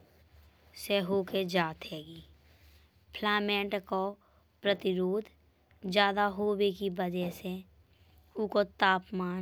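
No technical faults can be heard anywhere in the recording, so the signal carries the speech without any audible defect.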